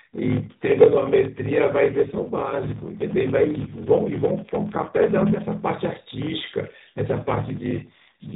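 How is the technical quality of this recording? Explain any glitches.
The quality is poor: a steady buzz with slowed-down speech runs through the whole recording, and the speech twice turns rougher and more synthetic. All of it sits inside the AMR narrowband mobile codec's usual 4 kHz ceiling, which at 12.2 kbps adds only light coloration.

Block size mismatch (padded), throughout: each 1024-sample read block is only partly filled, and the remainder is zeros. That produces a 43.1 Hz buzz and playback at 0.861 times normal speed, with pitch roughly unchanged. A waveform shows flat gaps repeating every block, and a spectrogram shows evenly spaced vertical stripes.

AMR rate drop, 1.92 to 5.48 s and 7.12 to 8.35 s: the codec falls from 12.2 to 5.9 kbps, trading speech bits for error protection. The speech becomes buzzier and more synthetic, though the band stays the same. On a spectrogram, the harmonics below 4 kHz blur into coarser, smeared bands with no gap or cutoff change.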